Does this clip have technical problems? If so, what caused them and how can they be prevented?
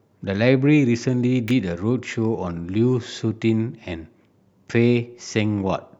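Yes. At 1.48 to 1.51 s there is an electrical switching spike, a sharp snap lasting about 25 ms that sits on top of the speech. It peaks around -15 dBFS. It is likely the result of a nearby switch, motor or static discharge arcing briefly, with the audio line picking up that burst of interference. Prevent it with shielded, balanced cabling routed away from mains switches and motors, and with suppression on noisy equipment.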